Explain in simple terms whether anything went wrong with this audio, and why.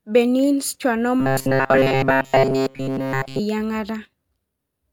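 From 1.20 to 3.40 s the speech turns into a robotic sound from repeated short buffers. A flat 134 Hz buzz appears. Tiny 7.5 ms chunks were likely looped.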